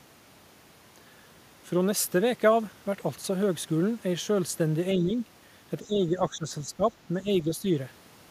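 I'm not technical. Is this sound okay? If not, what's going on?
No. The speech sinks at 4.95–5.14 s, 5.83–6.83 s and 7.22–7.64 s, most strongly in the middle stretch. This is likely speech suppressed in double talk: the call's echo control turned this side down while the other side was talking. Unlike a dropout, the sound dips but doesn't vanish.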